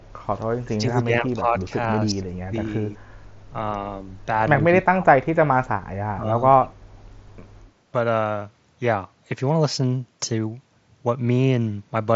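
Speech suppressed in double talk dips the voice at 0.41–0.45, 0.63–1.62, 2.12–2.24, 2.49–2.53, 2.95–3.01, 4.69–5.71 and 6.15–6.28 s, likely an echo canceller ducking the talker while the far side spoke. The deepest cuts, near 30 dB at 4.69–5.71 s, show as thinned waveform and faded spectrogram bands. The audio is band-limited below about 7.7 kHz by the mSBC headset codec.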